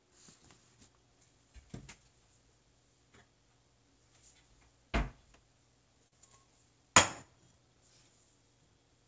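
At about 6.08 to 6.13 s there's a short concealed packet loss: roughly 40 ms of audio arrived too late, and the receiver papered over it by extending the preceding sound, then blending back. You hear a quick smear or wobble, over the call path's 8 kHz ceiling.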